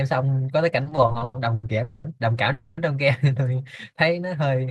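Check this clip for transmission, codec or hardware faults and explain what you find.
Two kinds of network trouble show up here, both early in the speech: a stretch of stutter, then two short freezes. No samples actually get dropped; the timing is what breaks.

From 0.83 to 1.66 s there are repeated stalls (stutter), nine in all. Packets were reaching the receiver slower than playback, so its jitter buffer kept running dry, and each time it stretched the last bit of sound to cover the hole. About 320 ms gets filled that way, roughly 39% of that span, with the longest stall around 100 ms. It comes across as dragging, hiccuping speech rather than missing syllables.

Then there are two call audio freezes, at 1.83 to 2.07 s (about 210 ms) and 2.52 to 2.80 s (about 250 ms). Each sounds like the audio holding on one moment as a buzz or hiss that never drops into silence, then picking up exactly where it left off. 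The likely cause is packets held up in transit and the jitter buffer emptying, so the receiver keeps the last sound going until they arrive. Each freeze adds its length as extra delay.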